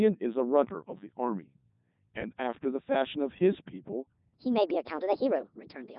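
From start to finish the speech carries Codec 2 vocoder damage: buzzy, robotic synthesis, heavy at its 3.2 kbit/s mode. From 4.34 s to the end, a section plays at the wrong speed, 1.42 times too fast and about seven semitones higher, likely from playback at a mismatched clock. Tempo and pitch rise together, unlike a pitch shift that keeps the timing.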